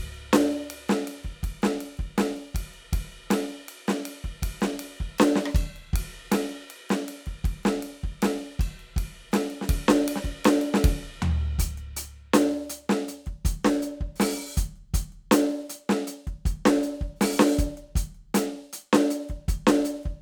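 It's a music clip, and there's nothing technically wrong to point to anywhere in it.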